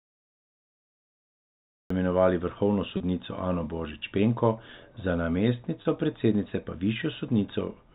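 Cut-off start at 1.90 s: this speech clip opens with digital silence from 0 s, and the audio then switches in abruptly mid-sound just before "imenovali vrhovno", with no natural attack or fade, because capture or streaming began late. Packet loss with pitch repetition at 2.97–3.00 s and 5.82–5.85 s: each is a single 30 ms gap, the first just after "imenovali vrhovno" and the second just before "predsednice pa". The receiver filled each gap by repeating the last pitch period, which gives a brief held, slightly buzzy moment before the sound resumes. Throughout, the G.711 mu-law telephone coding limits the band to below 4 kHz, which fits a 64 kbps fixed-line path.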